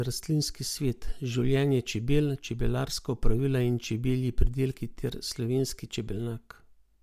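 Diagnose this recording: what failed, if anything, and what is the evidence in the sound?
Nothing in the recording points to a failure at any stage, from the wiring through to playback. There is no event in the sound that calls for a diagnosis.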